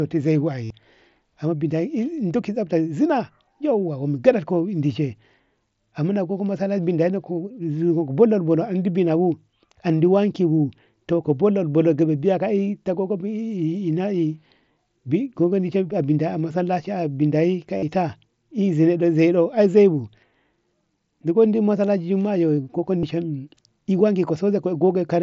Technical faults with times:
0.65-0.70 concealed Bluetooth headset packet loss
17.78-17.83 concealed Bluetooth headset packet loss
22.98-23.03 concealed Bluetooth headset packet loss

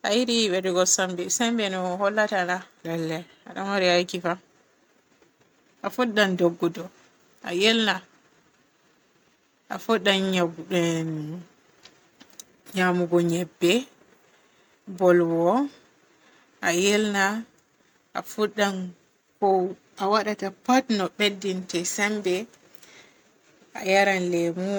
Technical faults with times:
none

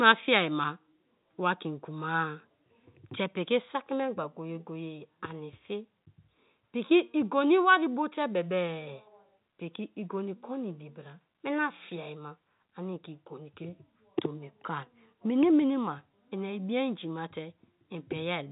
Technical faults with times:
none

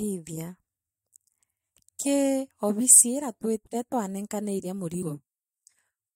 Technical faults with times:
5.01 compressed frames skipped

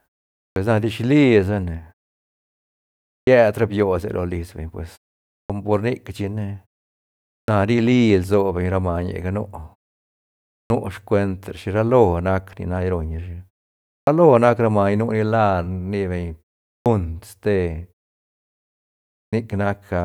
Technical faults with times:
0.50-0.56 clipped start after a pause
3.20-3.27 clipped start after a pause
5.43-5.50 clipped start after a pause
7.42-7.48 clipped start after a pause
10.63-10.70 clipped start after a pause
14.00-14.07 clipped start after a pause
16.79-16.86 clipped start after a pause
19.26-19.33 clipped start after a pause

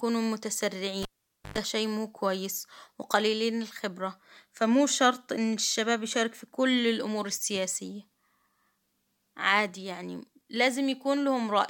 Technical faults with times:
1.02-1.58 cable pulled and plugged in

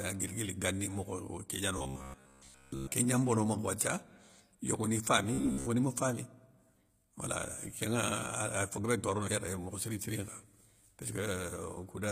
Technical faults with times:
0.00-12.11 HE-AAC compression
1.78-2.92 robotic sound from repeated short buffers
5.34-5.67 robotic sound from repeated short buffers

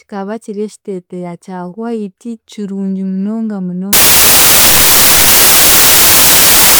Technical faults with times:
3.93-6.79 samples built from the wrong bytes

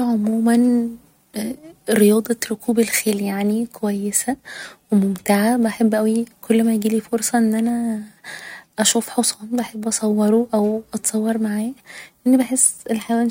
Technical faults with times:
none

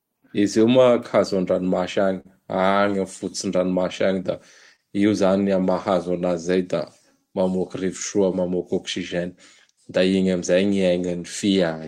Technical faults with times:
0.00-11.88 clock drift between sender and receiver
2.20-2.27 short stall from a late packet
4.07-11.07 repeated timing corrections
4.76-4.81 short stall from a late packet

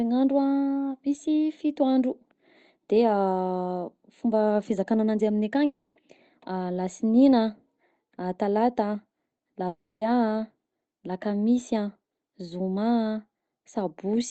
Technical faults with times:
5.65-5.97 long network dropout
9.67-10.03 long network dropout

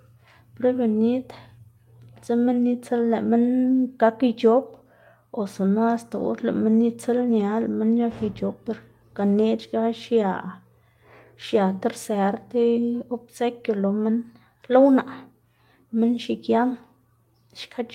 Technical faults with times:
7.39 lost packet rebuilt from error correction

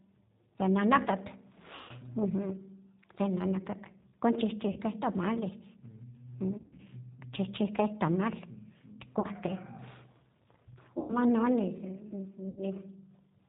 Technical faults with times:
0.00-13.49 G.729 codec
1.75-1.93 VoIP packet loss concealed by the speech codec
4.72-4.80 VoIP packet loss concealed by the speech codec
6.58-6.81 VoIP packet loss concealed by the speech codec
9.20-9.27 VoIP packet loss concealed by the speech codec
10.99-11.16 VoIP packet loss concealed by the speech codec
12.49-12.63 VoIP packet loss concealed by the speech codec

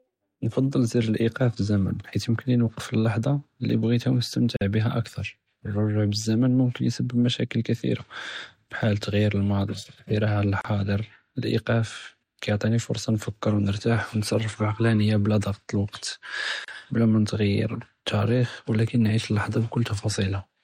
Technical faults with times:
4.56-4.61 gap at a join of encoded pieces
10.61-10.65 gap at a join of encoded pieces
16.65-16.68 gap at a join of encoded pieces

